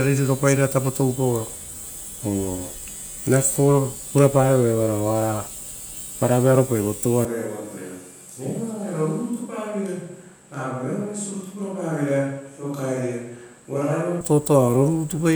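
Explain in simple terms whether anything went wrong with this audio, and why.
At 7.25 seconds the speech suddenly turns hollow and roomy, thinner in the low end, a bit quieter, and with more background noise. It snaps back at 14.21 seconds. This sounds like a switch to a distant microphone, likely after the close one failed.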